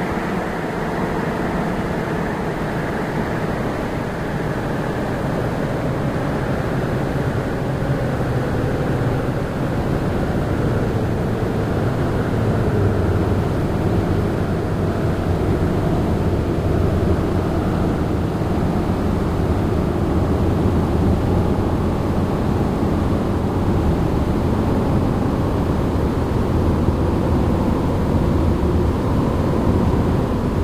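No technical faults can be heard at any point in the recording.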